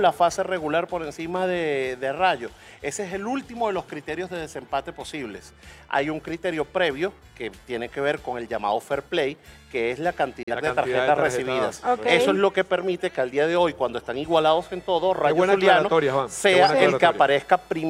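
At 10.43 s a digital broadcast dropout mutes the sound, which returns at 10.52 s. A gap of about 43 ms, fitting a single corrupt frame, fades out in 3 ms. Unlike packet-loss concealment, nothing is patched in: the hole is pure silence.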